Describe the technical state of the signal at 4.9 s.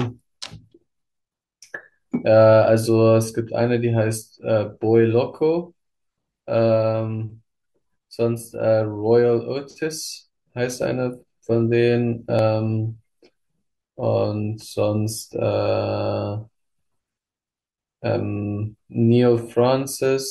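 At 4.9 s the speech sits inside a run of periodic USB or driver dropouts lasting from 4.39 to 12.39 s. Every 2.0 s a background task stalls the audio path and roughly a millisecond of signal is skipped, giving a tick. Unlike random glitches, the ticks keep strict, even spacing.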